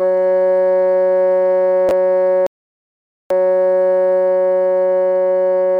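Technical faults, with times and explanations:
1.89–1.91 s, chunks out of order: two 10 ms slices of the music swap places, with one chunk arriving a single slot late and playing after the one that should follow it. Nothing is lost, but the waveform jumps at three hard joins, so the passage sounds briefly scrambled. On a spectrogram this shows as thin vertical broadband lines at each splice, breaking the otherwise continuous harmonic traces.
2.47–3.31 s, rebuffering stall: the music cuts to dead silence for about 0.84 s, then resumes exactly where it stopped, because playback ran out of buffered audio and waited for more to arrive. No material is skipped; the stall adds time. The waveform shows a flat line across the gap with an abrupt edge on each side, and the spectrogram shows an empty band across the gap.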